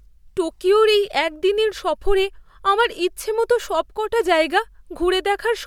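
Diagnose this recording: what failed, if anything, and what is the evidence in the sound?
Nothing stood out on listening that points to a failure at any stage of the chain.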